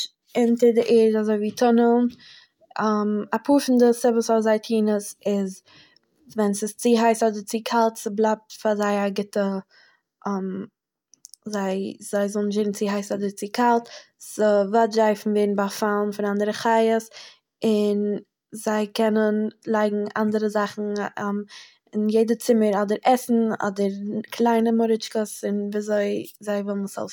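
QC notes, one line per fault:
Nothing to log: no audible faults found anywhere in the speech.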